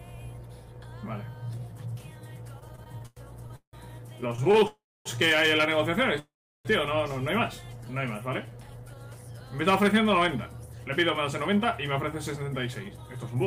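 Running under the whole clip is a video or display buzz: a screen or video cable has coupled into the audio path, putting a 59.94 Hz field-rate buzz with harsh hash above it about 30 dB below the sound, plus a thin whine at 15.7 kHz from the line scan. On a spectrogram this shows as a stack of evenly spaced harmonics from 59.94 Hz upward and a single hairline at 15.7 kHz across the full width.

From 2.59 to 3.76 s the audio stutters with repeated stalls. Packets arrived late, the jitter buffer kept emptying, and the receiver bridged nine gaps by continuing the last sound, the longest 170 ms, so about a third of that span is filler. Nothing is lost, but the sound drags and hiccups. A shorter burst follows at 4.21 to 4.64 s with six brief gaps of up to 26 ms. On the waveform these look like repeated, smeared stretches. The spectrogram shows frozen, horizontally stretched patches breaking the normal texture.

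A call audio freeze runs straight on from 4.67 to 5.08 s, and another comes at 6.19 to 6.68 s. Each is likely a packet hold-up that drained the buffer. The last sound carries on briefly as a fading buzz or hiss and then drops out, for about 270 ms and 360 ms of silence respectively. Playback then resumes where it stopped, adding roughly 0.38 s and 0.45 s of delay. Both freezes show as a short decaying tail followed by a flat gap on the waveform and a blank column on the spectrogram.

Between 7.77 and 8.99 s there is a jitter buffer slow-down. Running low, the receiver repeated single pitch periods and bits of pauses over and over, adding 139 ms, so the sound plays at about 89% speed at unchanged pitch. It comes across as drawn out. Harmonic lines stay at the same height on the spectrogram but stretch sideways, and the waveform shows near-identical cycles repeated back to back.

Jitter buffer speed-up follows at 10.48 to 10.96 s and again from 11.55 to 13.36 s. 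Holding excess audio, the receiver cut out short pieces of one or a few pitch periods, removing roughly 70 ms and then roughly 150 ms. This runs the sound at 113% and then 107% speed with pitch unchanged, so it feels hurried. On the spectrogram the events are compressed in time without any shift in frequency, and the waveform shows small splice points.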